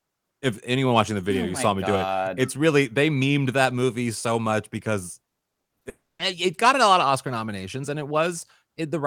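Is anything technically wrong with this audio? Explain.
Yes, there are two network faults in this speech. From 5.39 to 5.87 s there's repeated packet loss (robotic sound): six short gaps, the longest 40 ms, each patched by stretching the last sound, so it turns choppy. Right after, from 5.89 to 6.21 s, a long network dropout is the likely cause of a fading buzz or hiss, then roughly 220 ms of silence before the audio picks back up.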